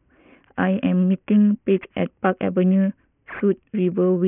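Aliasing runs throughout the speech, which fits a drop from 16 kHz to 6 kHz without filtering. Content above 3 kHz folds down, sitting roughly 25 dB below the speech, gritty and metallic.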